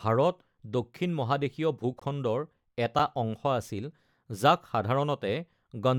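A speech clip with a block of digital silence from 2.00 to 2.02 s: 20 ms of samples cut straight to silence and back with no fade, heard as a short hole. Silence with hard edges, rather than a softened or concealed dip, most likely marks an output buffer not filled in time.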